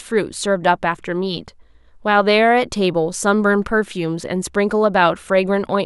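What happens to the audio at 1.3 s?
Nothing goes wrong at 1.3 s: the speech continues intact through that moment, with no dropout, click, glitch or other fault.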